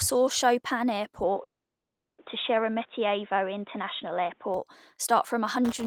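At 1.23 s the speech suddenly turns dull and boxy, with no gap and roughly no change in level. This is most likely an input switched to a poorer device, such as a second microphone or a headset's call profile. The band narrows, and a new noise floor appears about 40 dB below the speech. On a spectrogram the upper band goes abruptly empty at that instant and stays empty until 4.54 s, where the full bandwidth returns.

From 1.43 to 2.20 s comes a call audio freeze, likely from packets held up in transit until the jitter buffer ran dry. The last sound is briefly carried on and then drops to near silence for about 730 ms of the 750 ms filled. Nothing is lost: the speech resumes exactly where it stopped, now running about 750 ms later. The waveform shows a short decaying tail and then a flat stretch.

From 5.64 s to the end comes buffer tearing, a rough robotic buzz at 172 Hz riding on the speech. 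That rate fits a 256-sample buffer. Writer and reader cross inside each period, so roughly 15% of every buffer replays audio about 20 ms old, with hard joins on both sides. The waveform shows regular discontinuities at that spacing, and the spectrogram shows vertical striping with harmonics spaced at 172 Hz.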